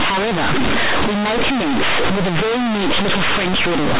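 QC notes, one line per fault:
Throughout: companded audio read as linear. The mu-law speech bytes are played as plain linear 8-bit samples with no expansion, so each sign change swings across roughly half the output range. Quiet passages come out as loud as peaks, giving harsh buzzy distortion and heavy noise in pauses.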